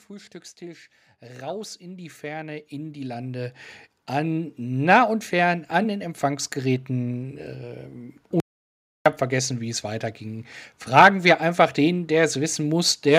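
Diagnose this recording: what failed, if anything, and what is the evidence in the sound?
Automatic gain rising, 0.07 to 4.89 s, ending just before "und fern an den": in the call-processing stage, gain control judged the input too quiet and ramped up by about 16 dB, so speech and background noise swell together over nearly five seconds.

Audio dropout to silence, 8.4 to 9.06 s, just before "habe vergessen wie es": speech halts mid-flow into 0.66 s of silence with no room tone. The input was likely lost at the device or driver while silence kept being written.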